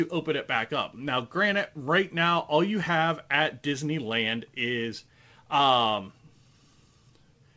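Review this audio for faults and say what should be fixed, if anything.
No faults; nothing needs fixing.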